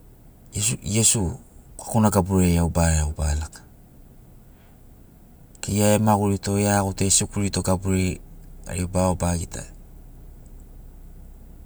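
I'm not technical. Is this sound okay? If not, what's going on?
Yes, this recording sounds fine, with nothing going wrong that you'd need to worry about.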